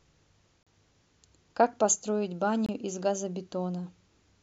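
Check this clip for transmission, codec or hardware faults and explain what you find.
Two brief dropouts to silence are audible. A gap between stream segments occurs at 0.63–0.67 s (about 37 ms) and at 2.66–2.69 s (about 25 ms). Adjacent segments' timestamps don't meet, so the player inserts silence, cutting the speech with hard-edged holes roughly 2 s apart, which fits 2-second segments.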